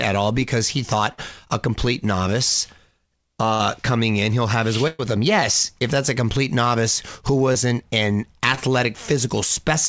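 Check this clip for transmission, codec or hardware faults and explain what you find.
The clip has five packet-loss faults in two kinds, heard over a call path with nothing above 8 kHz, which fits G.722 at 64 kbps.

Burst of packet loss occurs three times. At 1.12 to 1.20 s, after "all because he" and before "a complete novice", about 60 ms is missing. At 3.54 to 3.62 s, another 60 ms is missing. At 4.88 to 5.01 s, after "in he'll have his", 120 ms is lost. Each time the receiver extends the last sound and fades it down. A voiced sound becomes a held buzz, other sounds a fading hiss. Then the audio jumps ahead, skipping what was lost.

Short concealed packet loss occurs twice. At 7.53 to 7.57 s, after "a complete novice who", 20 ms failed to arrive in time. At 8.55 to 8.59 s, another 20 ms was lost. The decoder patches each hole by continuing the preceding sound, then blends back into real audio. 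The patches are brief. They come across as a quick smear or wobble rather than a gap.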